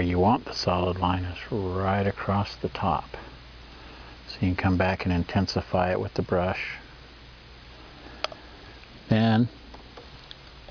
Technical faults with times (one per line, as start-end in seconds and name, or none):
none